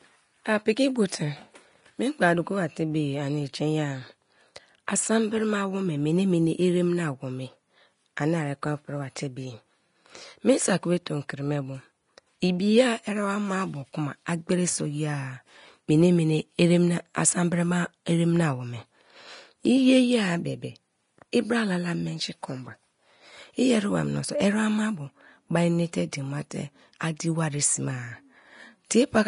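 All the way through, the speech has a hissy, grainy top end with nothing above about 10.6 kHz. That's the sound of Vorbis compression, likely at a low bitrate around 34 kbps, where the codec quantises the treble so coarsely that fine detail turns into noise.

At 4.87 s and again at 21.32 s there's pre-echo. A sharp attack lands late in a transform block, and the noise sized for that loud moment spills backwards, giving a short hiss of about 13 ms and 10 ms before each onset and a smeared attack.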